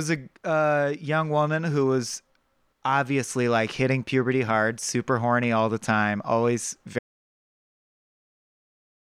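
An audio dropout to silence hits this speech clip at 6.99 s and runs to the very end at 9.07 s, about 2.1 s of nothing. The sound stops abruptly mid-flow and what follows is silence, with no room tone or noise floor underneath. The likely cause is the input signal being lost, through a disconnected device, a broken link or an accidental mute, while recording carried on writing silence, so whatever was said in those final seconds is gone.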